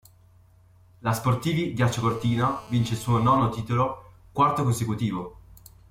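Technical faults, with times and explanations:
1.89 to 3.38 s, GSM phone buzz. A hard, raspy buzz at 217 Hz sits about 24 dB below the speech. It stays steady because a nearby 2G phone on a call transmits in regular bursts. The audio circuit rectifies those radio pulses into a harmonic-rich tone.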